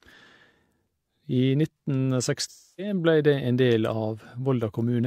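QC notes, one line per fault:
2.47–2.93 s, AAC frame loss with concealment: roughly 0.3 s of coded audio never reached the decoder, which fits a run of about seven frames, so the decoder rebuilt the gap from the last good spectrum, reusing its energy with scrambled phase. The speech turns into a smeared, hollow, noisy wash that weakens as the guess is stretched, until clean decoding resumes right before "ble det".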